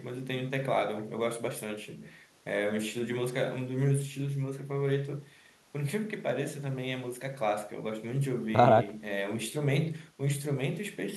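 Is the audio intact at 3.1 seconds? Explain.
Yes, at 3.1 seconds the speech plays through intact, with no audible fault at that moment.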